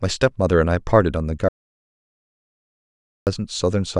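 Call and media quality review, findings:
Audio dropout to silence, 1.49 s to 3.27 s: speech cuts off mid-flow, about 1.8 s of silence with no room tone, then resumes abruptly. Likely input loss upstream (device disconnect, link failure or mute) while the encoder kept writing silence. Content lost.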